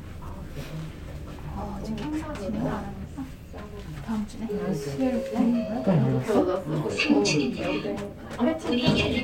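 No technical faults can be heard anywhere in this recording of sounds.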